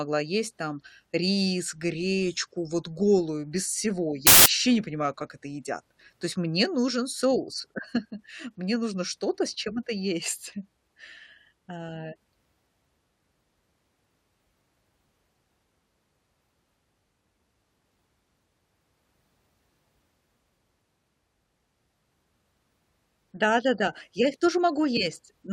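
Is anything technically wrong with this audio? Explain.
Yes. The speech has a burst of samples built from the wrong bytes, from 4.27 to 4.46 s. It falls just after "вот голую без всего" and before "не понимаю как это". For about 0.19 s the reader assembles each sample incorrectly. The byte order or alignment is off. The rapidly changing low bits end up as the most significant part of each value. The result is loud, harsh broadband noise in place of the speech.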